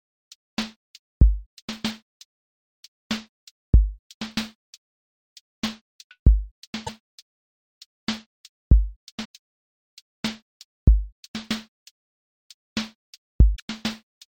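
Damaged data in a compressed stream shows up at 6.83–6.89, 9.21–9.26 and 13.52–13.6 s: corrupted frames make the decoder lose sync, leaving brief glitches.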